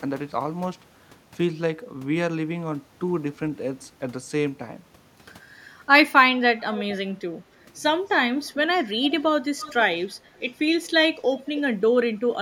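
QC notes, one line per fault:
6.77–6.85, 8.37–8.50, 8.76–9.23, 9.58–9.74, 10.35–10.52, 11.47–11.60 s, echo leak: faint copies of the speech return about 308–310 ms late, roughly 15 to 35 dB below the direct speech. This likely comes from a far-end echo canceller letting loudspeaker pickup through. The spectrogram shows weak repeats of earlier formant patterns offset by that fixed delay.
11.22–11.27 s, speech suppressed in double talk: the speech dips by about 10 dB for roughly 50 ms, likely because an echo canceller confused it with loudspeaker echo while both ends were active. The waveform shows a brief envelope notch, and the spectrogram a short dimmed stretch.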